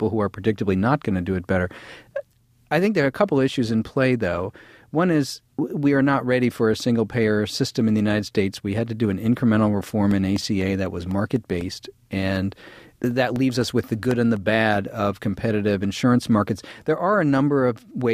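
From 9.86 to 14.37 s, periodic USB or driver dropouts occur: something stalls the audio path every 0.25 s, and about a millisecond of signal is lost each time and filled with silence. Around twenty evenly spaced ticks result, audible only while speech is present.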